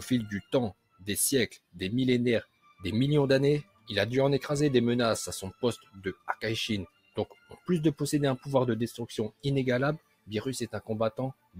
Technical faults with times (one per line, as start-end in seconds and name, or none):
0.00-11.59 noise suppressor applied to music or sounds
0.42-1.81 sound cut by the noise suppressor
2.44-2.83 sound cut by the noise suppressor
3.63-3.89 sound cut by the noise suppressor
5.52-6.28 sound cut by the noise suppressor
6.86-7.69 sound cut by the noise suppressor
9.30-9.45 sound cut by the noise suppressor
9.98-11.59 sound cut by the noise suppressor